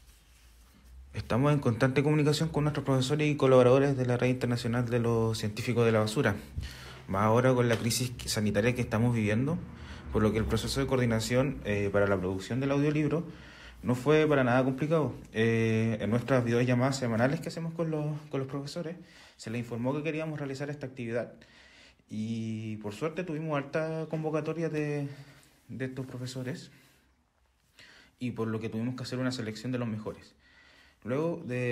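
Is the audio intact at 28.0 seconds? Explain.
No. From 17.44 s to the end, one channel drops out, likely a lost stereo feed, so the level falls abruptly by about 6 dB and the sound is otherwise unchanged.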